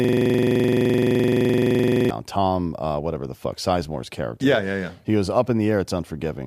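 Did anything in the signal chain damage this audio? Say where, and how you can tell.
Yes, a system hang loop at the driver/buffer stage: from the start to 2.10 s, a 42.67 ms slice repeats at 23.4 Hz as a stutter, which fits a 2048-sample buffer.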